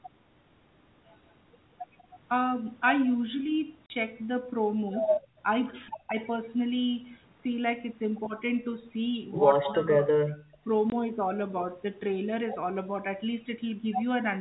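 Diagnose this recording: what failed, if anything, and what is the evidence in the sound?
Packet loss filled with silence, at the network stage: hard-edged holes at 3.86–3.90 s and 10.90–10.92 s, 40 ms and 20 ms long, fitting 20 ms packets, unlike smooth suppression dips.

Background gated by the echo canceller, in call processing: from 5.21 to 5.39 s the room sound falls by about 16 dB, then returns. There's no clicking hole.

Speech suppressed in double talk, in call processing: speech dips at 6.07–6.17 s, 9.74–10.08 s and 10.48–10.65 s, by about 10, 15 and 30 dB. This is likely the canceller ducking overlapping speech.

Echo leak: at 9.64–9.75 s a delayed copy trails 181 ms behind, about 10 dB down. It is likely residual echo the canceller missed, distinct from room reverberation's smeared tail.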